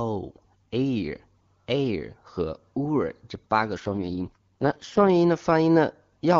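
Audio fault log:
3.77 to 5.09 s, AMR rate drop: the speech turns rough, raspy and synthetic with no gap and no loss of bandwidth, then clears. This fits the HD Voice link falling from 23.85 kbit/s to the lowest AMR-WB rate, around 6.6 kbit/s, to protect against a weak radio connection.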